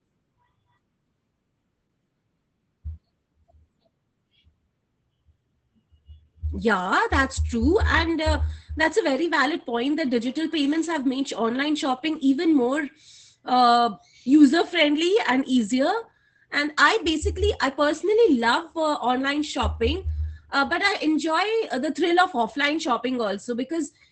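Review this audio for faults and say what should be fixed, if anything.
Opus voice compression runs through the whole speech clip. Nothing remains above about 8.8 kHz, and the SILK coder's coarse excitation leaves the voice plainly hoarse and slightly robotic, consistent with roughly 12 kbps. That grainy texture sets it apart from plain low-pass filtering, which only dulls. To prevent it, encode at a higher bitrate or keep an uncompressed source.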